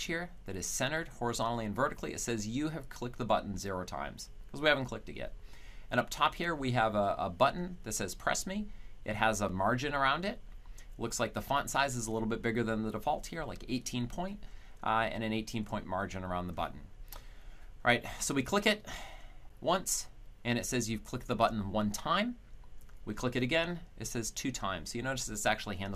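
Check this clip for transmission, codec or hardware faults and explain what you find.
The clip has one kind of fault: a gap between chunks, occurring twice.

Gap between chunks at 9.49 s and 19.49 s. The audio was handled in blocks about 10 s long. At each join, a hole of about 6.5 ms was inserted before the next block began. Nothing is removed. The sound simply stops and restarts. Each gap is a brief dropout with abrupt edges, heard as a short hole in the sound. The exact 10 s spacing gives it away.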